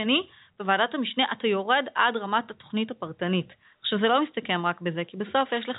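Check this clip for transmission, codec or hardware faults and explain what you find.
No transmission or hardware faults.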